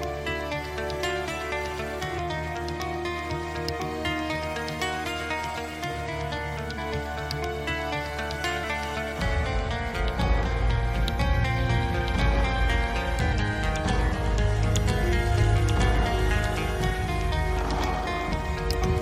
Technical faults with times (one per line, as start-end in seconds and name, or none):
2.17 damaged data in a compressed stream
6.77 damaged data in a compressed stream
8.63 damaged data in a compressed stream
13.32 damaged data in a compressed stream
15.41 damaged data in a compressed stream